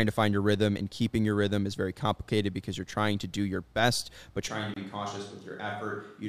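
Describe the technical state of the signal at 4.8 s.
The signal is in a switch to a distant microphone, running from 4.48 s to the end. The sound turns roomy and hollow, with thinner bass, a level drop of about 10 dB, and background noise about 35 dB below the speech. The likely cause is that the close microphone's feed was lost and a farther one took over. A spectrogram shows weaker low frequencies and a raised noise floor, and the waveform steps down in amplitude at 4.48 s.

Just before 4.8 s, a gap at a join of encoded pieces opens from 4.74 to 4.76 s, a silence of 25.8 ms. Two separately encoded pieces were joined untrimmed, leaving encoder delay and end padding in place. On the waveform it is a flat dropout with smeared edges; the spectrogram shows a thin vertical blank stripe before the sound resumes.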